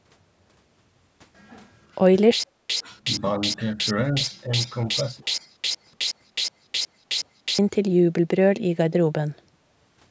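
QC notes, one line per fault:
2.44 to 7.59 s, stutter with silent gaps: the playback likely stalled repeatedly, and on each retry the player replayed its last fragment before running dry. The same 108 ms burst of speech comes back 14 times at a steady 368 ms period, each followed by about 260 ms of dead digital silence. The result is a mechanical, evenly paced repetition, and the speech that should have filled those five seconds is simply missing.
2.68 to 2.84 s and 3.74 to 3.85 s, speech suppressed in double talk: during moments when both ends were likely talking at once, the echo canceller could not tell the near talker from the loudspeaker echo and pulled the level down. The voice dips by about 20 dB in the first spot and about 15 dB in the second, over roughly 100 ms and 70 ms. These are short holes where the speech sinks.
4.23 to 4.44 s and 4.67 to 5.55 s, echo leak: one side likely played the call on a loudspeaker, and that side's echo canceller let part of the microphone pickup through. 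A faint copy of the speech trails the original by 302 ms, sitting about 30 dB below it. It is a quiet, delayed doubling, heard first as a brief scrap and then for nearly a second.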